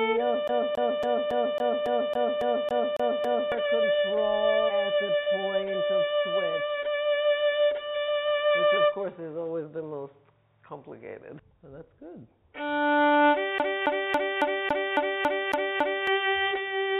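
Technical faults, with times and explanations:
0.48 to 3.52 s and 13.58 to 16.07 s, CD stuck on one turn: the same 0.28 s slice of sound repeats 11 times in the first run and 9 times in the second. Each repeat ends with a short mute where playback jumps back one track, as if a scratch were catching the laser on every rotation. The result is a fast, perfectly even stutter. On the waveform, identical blocks tile end to end with thin dropouts between them. On the spectrogram, the same pattern stamps out repeatedly, below the 4 kHz ceiling that the call path leaves on everything.
5.23 to 5.29 s, short concealed packet loss: about 20 ms of audio failed to arrive in time, and roughly 7 ms of real signal is gone altogether. The receiver bridged the gap with about 30 ms of synthesized continuation built from the preceding sound, then blended back into the real audio. It is heard as a brief smear or wobble. 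On the spectrogram, the last harmonics or noise texture stretch flatly across the gap. The waveform shows a smoothed, oddly regular patch where the fine detail drops out.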